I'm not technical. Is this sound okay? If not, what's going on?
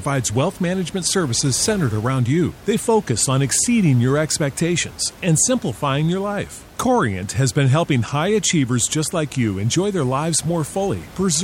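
Yes, nothing in the signal has gone wrong technically, and the faint background noise of the room sits well beneath the speech.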